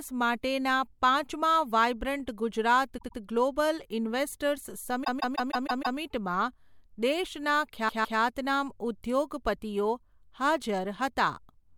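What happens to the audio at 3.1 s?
A short run of compressed frames, which fits about four frames, was sent again: repeated frames from 2.97 to 3.18 s, right after "માટેના પાંચમા વાઇબ્રન્ટ ગુજરાત". The decoder plays the same 104.5 ms block two extra times, adding 209 ms and producing a stutter.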